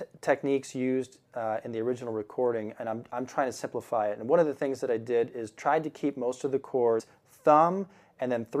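At 6.99 s, compressed frames are skipped. About a tenth of a second of audio never plays. The sound jumps forward without a pause. The cause is whole frames of the compressed stream going missing or being rejected by the decoder as damaged. The size of the jump fits a handful of frames, roughly four, each lasting about 26 ms. Neighbouring frames overlap, so the join is not a sharp click. It is a short, smeared blip.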